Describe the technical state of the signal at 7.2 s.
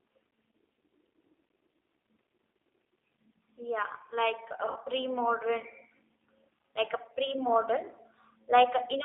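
At 7.2 s the speech carries G.729 codec damage, present from start to finish rather than just at this moment. The codec rebuilds each 10 ms frame from a vocal tract filter, a pitch predictor and a few pulses, so the sound is plainly rough and buzzy, which fits an 8 kbit/s codec. A spectrogram shows a hard ceiling near 3.6 kHz and little below 300 Hz.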